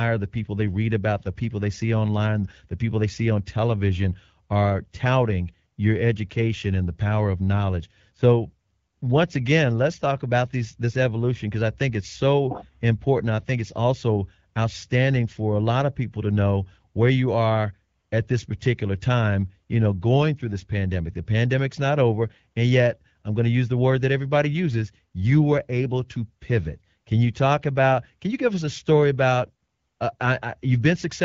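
No faults can be heard anywhere in this recording.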